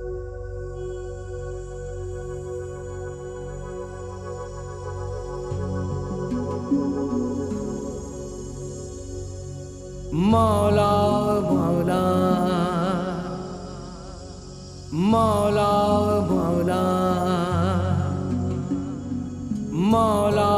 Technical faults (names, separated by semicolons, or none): none